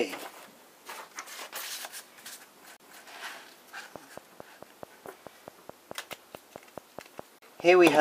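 At 2.77 to 2.80 s there is a CD skip. The laser lost its track and jumped to another turn of the disc's spiral. The player muted for roughly 30 ms and resumed from a different point, heard as a tick followed by an abrupt displacement in the sound.

From 3.96 s to 7.83 s a train of clicks runs at a regular 4.64 per second, about twenty in all, peaking at around 10 dB above the signal. The similar, evenly spaced ticks are likely from interference from nearby equipment or a faulty connection or power supply.

Within that train, at 7.39 to 7.42 s, a second CD skip mutes the output for roughly 40 ms before playback resumes from another position on the disc.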